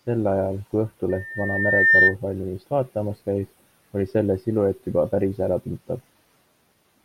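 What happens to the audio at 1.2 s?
Loudspeaker feedback squeal runs from 1.09 to 2.15 s: the microphone re-amplifies its own speaker output, and a 1.8 kHz tone swells over roughly 0.7 s to well above the speech.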